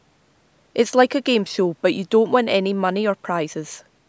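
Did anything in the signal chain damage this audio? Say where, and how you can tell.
No, nothing in the chain damaged this speech.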